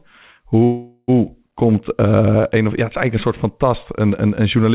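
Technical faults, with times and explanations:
0.64–1.11 s, call audio freeze: the sound stalls for about 0.44 s, the last moment stretched into a fading buzzy hiss rather than true silence, then carries on exactly where it stopped, so everything after arrives 0.44 s late. The likely cause is delayed packets draining the jitter buffer. Unlike a packet-loss dropout, no audio is missing, only a gap inserted, heard through the call path's 4 kHz band limit.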